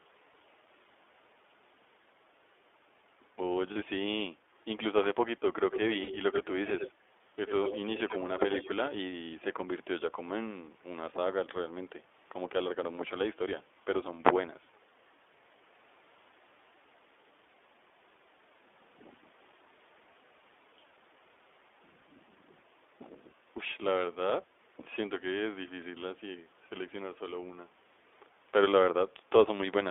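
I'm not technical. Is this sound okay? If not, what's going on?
No, there are three kinds of problem in this speech clip.

Throughout, the speech sounds narrow and slightly rough, a bit synthetic, like an old phone line. That comes from the iLBC codec, a phone-call compression method that squeezes the sound into small 20 ms pieces. It keeps only the middle of the sound, roughly 300 Hz to 3.5 kHz, so the fullness and the crisp top end are gone. The damage is plainly audible.

At 0.32 to 0.34 s, 3.72 to 3.78 s and 6.04 to 6.09 s, the speech briefly turns into a held, faintly buzzy or breathy sound. These are lost iLBC frames: one piece of the call (20 ms) went missing at the first point and two pieces (40 ms) at each of the other two. The decoder filled each gap by repeating the last bit of sound it had, mixed with noise. The speech snaps back straight away because each piece is decoded on its own.

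From 5.71 to 6.94 s, and again at 7.47 to 7.77 s, 7.97 to 8.19 s and 8.38 to 8.69 s, a second, fainter copy of the speech trails just behind it, about 89 ms late. It is a little quieter than the speech itself, and weaker still in the third stretch. This is an echo leak, likely from one side using a loudspeaker whose echo cancelling let some of the sound slip back into the call.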